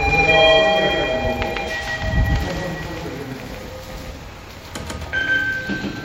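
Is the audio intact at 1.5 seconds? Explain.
No, a doubled audio track runs throughout, including 1.5 s: an equally loud copy trails by around 150 ms, likely from a second capture path. Unlike an echo, it has no decay or room colour.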